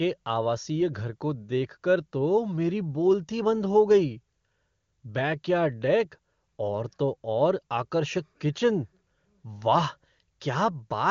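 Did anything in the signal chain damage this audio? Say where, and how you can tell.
No, nothing in the signal chain damaged this audio.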